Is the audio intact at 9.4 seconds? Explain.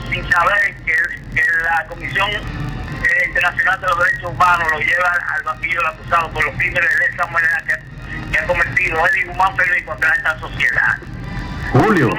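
No. At 9.4 seconds, as throughout the clip, the filter is restarted on every block. It loses its state and begins each block from silence. Each block start adds a small transient. These form a buzz at about 46.9 Hz that follows the signal's level, which fits a 1024-sample block.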